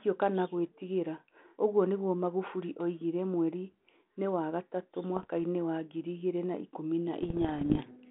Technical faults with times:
5.16-5.30 bit errors on an ADPCM link
7.22-7.82 bit errors on an ADPCM link

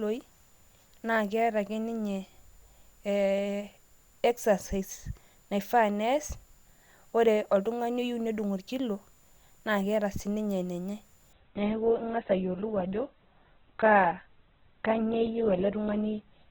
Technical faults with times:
11.33-16.50 adaptive stream at a lower bitrate

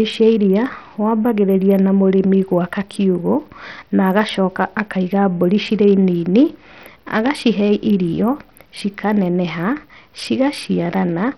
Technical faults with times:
0.00-11.38 Bluetooth SBC compression

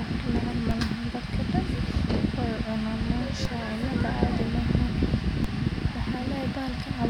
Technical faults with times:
0.71 DC step
3.45 DC step
5.44 DC step

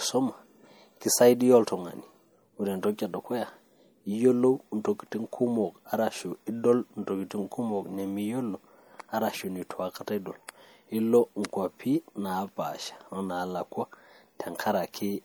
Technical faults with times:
0.00-15.24 MP3 compression

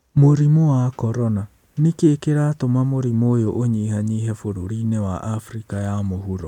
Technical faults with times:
none

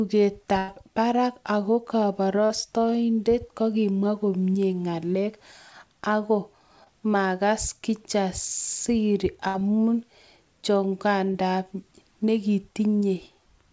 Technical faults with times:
0.58-0.70 burst of packet loss
2.46-2.52 short concealed packet loss
6.84-6.88 short concealed packet loss
9.48-9.56 burst of packet loss
11.32-11.36 short concealed packet loss

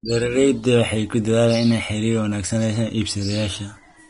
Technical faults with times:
0.00-4.10 Vorbis compression

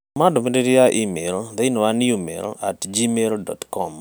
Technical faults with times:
none

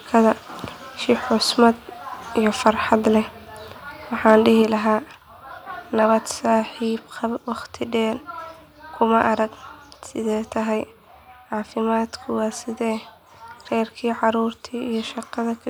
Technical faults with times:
2.67-2.93 microphone overload
4.28-4.34 microphone overload
4.62 microphone volume stepped down

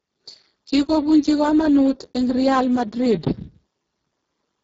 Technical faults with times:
0.00-4.63 Speex codec

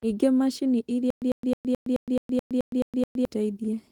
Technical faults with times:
1.10-3.25 stutter with silent gaps

